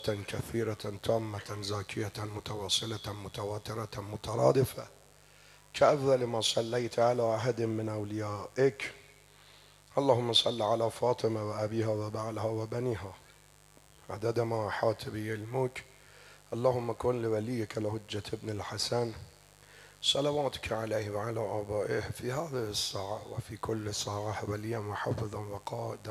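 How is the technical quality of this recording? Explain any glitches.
The main problem is a mains buzz running the whole way through. Interference from a dimmer, rectifier or bad shielding spikes twice per 50 Hz cycle, leaving a raspy buzz roughly 30 dB under the sound.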